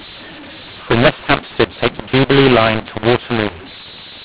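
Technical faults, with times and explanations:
throughout mu-law and A-law mixed up: the telephone samples were encoded with A-law but decoded as mu-law, so each 8-bit code maps to the wrong level. Loud and soft parts come out scrambled, making the speech harsh and distorted, and pauses fill with hiss instead of silence.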